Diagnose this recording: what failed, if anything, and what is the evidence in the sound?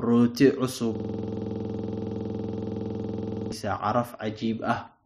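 A system hang loop at the driver or buffer stage: from 0.95 s to 3.52 s one 46.44 ms slice of speech repeats exactly, giving a rigid 21.5 Hz stutter, which fits a 2048-sample buffer. Unlike concealment of lost network packets, the repeats never vary or fade.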